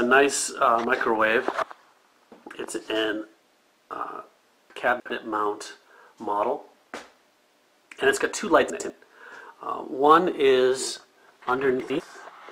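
Brief jumbled moments occur at 4.7 to 5.1 s, 8.7 to 8.9 s and 11.8 to 12.0 s. These are chunks out of order: a block of audio, consistent with 100 ms chunks, plays late, three chunks behind at 4.7 s and one behind elsewhere, leaving hard joins.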